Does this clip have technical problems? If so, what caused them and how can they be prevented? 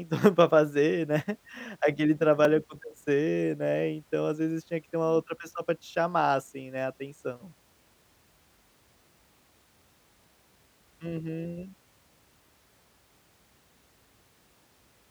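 Yes. At 2.45 s, between "para fazer né aquele" and "acontecer né", there's a block of digital silence. The speech drops abruptly to silence for 1.45 ms and returns, heard as a tick or dip. That length fits one 64-sample output buffer left unfilled. Larger buffers or higher audio-thread priority would prevent this.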